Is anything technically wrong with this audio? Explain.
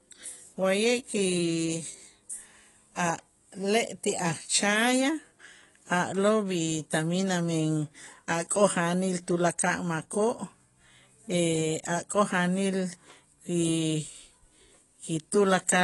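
Yes. AAC compression damage runs through the whole clip: the speech is dull and smeared, nothing is present above about 11.5 kHz, and sibilants and held vowels carry a fizzy, warbling texture. The likely cause is low-bitrate AAC-LC coding, which fits a rate around 32 kbps. At that rate the encoder can't afford the upper band, so it lowers the cut-off, and it coarsely quantises what remains, leaving gaps in the spectrum that shimmer from frame to frame.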